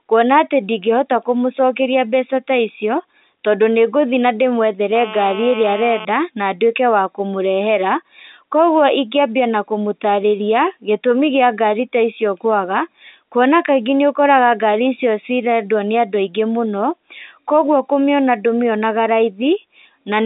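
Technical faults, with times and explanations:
4.95 to 6.05 s, GSM phone buzz: a hard, raspy buzz at about 217 Hz, thick with harmonics, sits over the sound for roughly 1.1 s at about 13 dB below the signal level and stops just before "na ndwĩke". A nearby 2G handset in an active call pulses its transmitter 217 times a second; the audio circuitry rectifies those radio bursts into a pulse train, so the buzz is steady while it lasts and bears no relation to the speech.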